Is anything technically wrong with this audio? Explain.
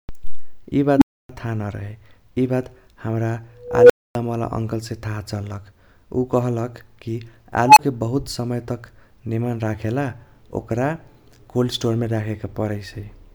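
Yes, there's an unstable filter fault, and it hits three times.

At 0.96 to 1.29 s, just before "थाह नरहे इबात हमरा", a tone around 300 Hz swells over about 57 ms, then drops to about 279 ms of silence. At 3.63 to 4.15 s, between "थाह नरहे इबात हमरा" and "अंकलसे थाह चल्लक", a tone around 500 Hz builds over about 265 ms, followed by about 255 ms of silence. At 7.67 to 7.79 s, a tone around 1 kHz builds over about 96 ms, with only about 23 ms of silence after.

A recursive filter got bad coefficients, so its feedback keeps amplifying until the tone clips and the numbers overflow. The output then goes dead until the filter resets, which is why each squeal is followed by a gap.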